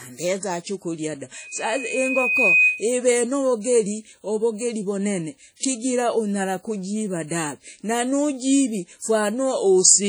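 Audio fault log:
Throughout: WMA compression, likely. The sound is washy and rings, with hiss that breathes with the signal. Long transform blocks spread quantisation noise over tens of milliseconds, and weak components drop out. The heavy damage fits a bitrate near 32 kbps.
1.34 to 2.90 s: loudspeaker feedback squeal. A single 2.5 kHz tone swells over about a second to roughly 5 dB above the signal. A microphone picks up its own loudspeaker. At that frequency loop gain exceeds one, so it grows unaided.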